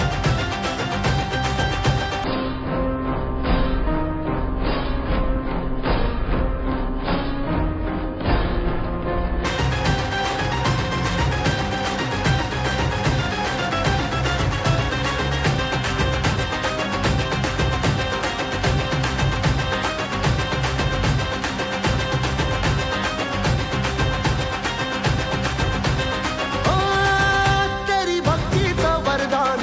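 From 2.24 to 9.45 s, the audio has a wrong sample rate fault. It plays at one third of its proper speed, which fits 48 kHz material played back at 16 kHz. Pitch drops by 19 semitones. The sound becomes very low, slow and dragging.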